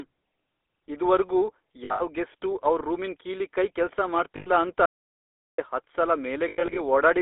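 GSM full-rate codec, throughout the clip: the speech passes through a 13 kbps vocal-tract model driven by sparse, regular pulses, with the line band running from 300 Hz to 3.6 kHz. The result is thin, muffled speech with a plainly audible buzzy, gravelly roughness.

Lost GSM frames, at 1.84 to 2.02 s, 4.36 to 4.50 s and 6.48 to 6.80 s: damaged frames are filled by repeating the last good one, producing a rough metallic ring. The first loss totals 140 ms within 160 ms, which fits about seven 20 ms frames, with the longest run around 70 ms. The second loses 100 ms, five frames. The third loses 180 ms scattered over 280 ms, with the longest run roughly 100 ms.

Audio dropout to silence, from 4.86 to 5.58 s: the sound cuts out abruptly mid-flow for about 0.73 s into dead digital silence with no room tone, then returns just as abruptly. The likely cause is the input being lost while the recorder kept writing silence.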